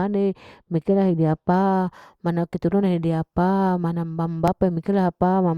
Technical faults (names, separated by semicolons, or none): pre-emphasis left on; repeated buffer